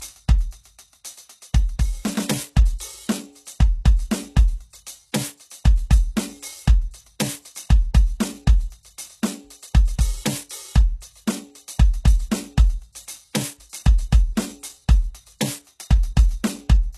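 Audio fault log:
throughout, HE-AAC compression likely: treble above the crossover is rebuilt from copied lower bands, sounding gritty and metallic, nothing above 12.3 kHz, fitting roughly 16 kbps.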